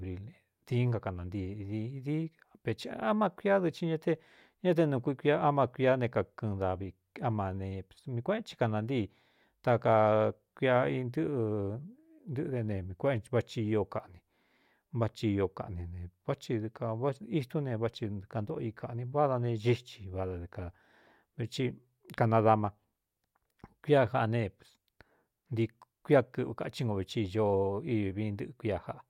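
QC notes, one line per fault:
No faults detected: the speech signal holds steady and continuous, with nothing heard that points to any problem in capture, processing or transmission.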